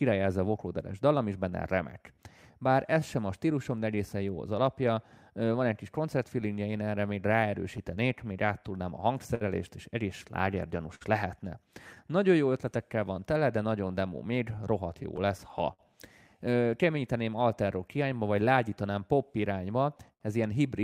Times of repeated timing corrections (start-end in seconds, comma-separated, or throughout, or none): 0.10-19.72